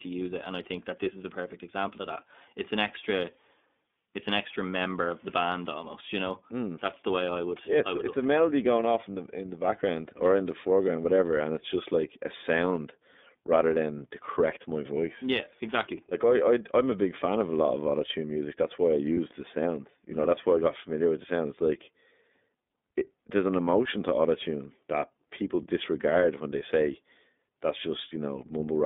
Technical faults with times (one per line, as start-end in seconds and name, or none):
0.00-28.85 iLBC codec
19.14-19.18 lost iLBC frames